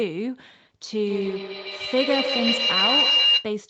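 From 1.07 to 3.5 s, a feedback howl builds near 3 kHz, with repeats roughly every 150 ms, and peaks about 5 dB above the speech.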